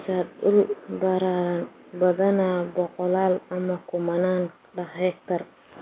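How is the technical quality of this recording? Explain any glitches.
No glitches are audible anywhere in this speech.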